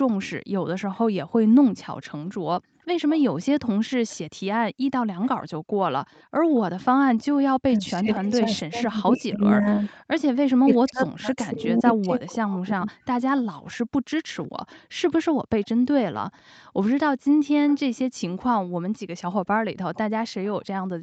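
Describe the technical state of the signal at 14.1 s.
An echo leak is running here, from 13.4 to 16.17 s. The far end's echo canceller likely failed to strip its loudspeaker's output from its microphone, so a faint copy of the speech comes back 0.51 s late, sitting well beneath the direct speech.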